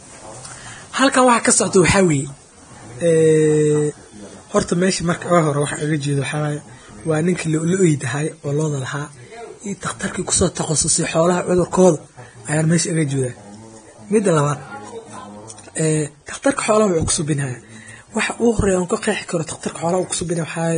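Speech runs the whole way through with heavy damage of the kind Vorbis compression leaves, likely from encoding at a low bitrate. Nothing is heard above 9.7 kHz. Below that cut-off, the treble has been quantised so coarsely that fine detail turns into hiss. The result is a grainy, roughened sound, and consonants lose their crispness. That heavy damage points to a bitrate somewhere near 24 kbps. At 19.47 to 19.49 s there is pre-echo. A burst of noise leads into a sharp onset by about 23 ms. The codec spread its quantisation noise across the whole block, so the hiss meant for the loud attack leaks into the quiet moment before it. That attack sounds softened and smeared.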